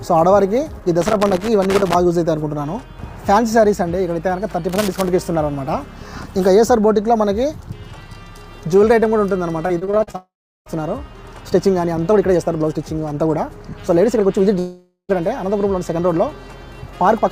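From 1.01 to 1.95 s, and again from 4.69 to 5.10 s, an irregular scratchy crackle breaks through the sound. This is loose connector crackle: a worn or dirty contact keeps making and breaking as it shifts, chopping the signal on and off, and each break in any DC on the line adds a click.

Between 9.67 and 10.16 s the audio turns choppy, with bits dropping out in quick succession. This is repeated packet loss, the robotic kind. Audio arrived with a rapid series of short holes, the longest about 40 ms. Each was patched by stretching the previous sound, so about a third of this half-second is filled-in material rather than real audio, which gives the stuttering texture.

Right after, from 10.16 to 10.76 s, the sound smears into a fading buzz and then about 0.36 s of silence before resuming further along. A second, similar break runs from 14.59 to 15.11 s, where the fading tail lasts longer and only about 0.1 s of outright silence is left. 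Both are long network dropouts, likely the result of half a second of audio never arriving. The receiver extended the last sound until it died away, and that stretch of audio is simply missing when the sound returns.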